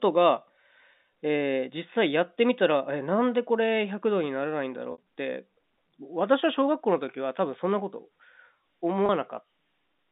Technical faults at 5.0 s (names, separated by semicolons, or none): packet loss with pitch repetition